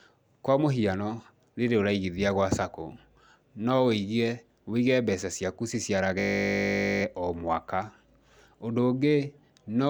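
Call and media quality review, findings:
System hang loop, 6.2–7.02 s, before "o mwaka": steady 50 Hz buzz from one 20 ms slice repeating exactly, about 40 times. The host or driver froze while the audio device kept cycling its ring buffer. Identical repeats, unlike decaying codec concealment.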